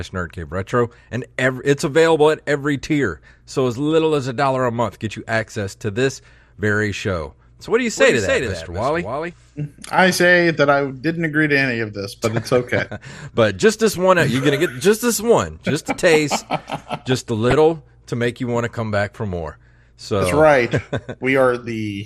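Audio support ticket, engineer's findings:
Dull, gurgling speech throughout with a granular edge and missing top end. Consistent with MP2 compression, likely at a low bitrate around 80 kbps. Sub-band allocation is starved, so upper bands drop out and the remaining bands are coarsely quantised.

Doubled audio track, 7.97 to 9.33 s, between "so what do you" and "i say that i". A second full-band copy trails by roughly 0.3 s, about 5 dB down. It starts and stops abruptly with no room tail. Likely a second capture path.

DAB burbling at 17.50 to 17.53 s, after "a taste just a", and at 20.08 s, after "come back for more". Short noise blips in single sub-bands. Residual bit errors corrupt MP2 samples.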